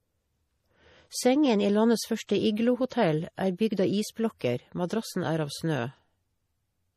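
A speech clip with plainly audible MP3 compression throughout, likely from a low bitrate around 40 kbps. A spectrogram shows a hard ceiling at 15.1 kHz and patchy high bands flickering frame to frame, heard as a watery, swirly edge on sibilants. Pre-echo appears twice: 2.27–2.29 s, just after "i landets", and 4.88–4.90 s, just before "er av snø". Each time a short hiss of about 21–24 ms precedes a sharp onset, visible on the waveform as low-level noise ahead of the attack, which sounds softened.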